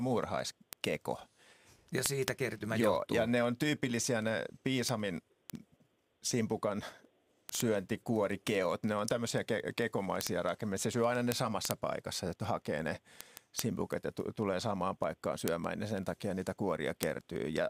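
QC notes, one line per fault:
0.12–17.70 s, word clock ticks: a steady train of sharp clicks, roughly one every 50 ms (about 20 per second, some three hundred in all), runs under the speech with uneven strength from tick to tick. The receiving device is running on its own clock rather than locking to the digital input, off by something like 400 ppm. Each time the two clocks slip past each other, a single sample is dropped or repeated and the waveform jumps, producing a tick.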